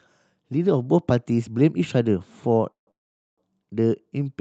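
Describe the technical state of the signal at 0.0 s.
At 0.0 s the signal is intact, with no fault present, only the ordinary band-limited character of the call path, which holds the speech below about 8 kHz.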